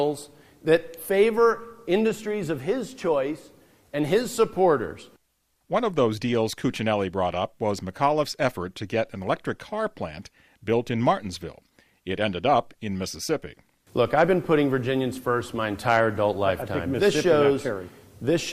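No technical faults are audible anywhere in the clip.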